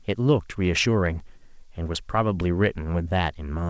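No technical faults can be heard in this speech recording. It has passed through a call path whose codec leaves nothing above 8 kHz, which fits wideband G.722 coding.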